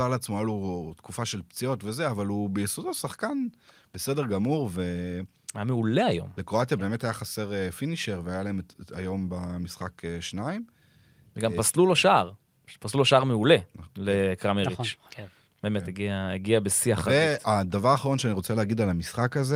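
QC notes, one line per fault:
No faults heard anywhere in the speech recording.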